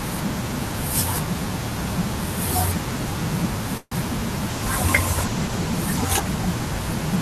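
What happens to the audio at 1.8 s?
Nothing goes wrong at 1.8 s: the speech carries on cleanly through that moment with no dropout, click or distortion.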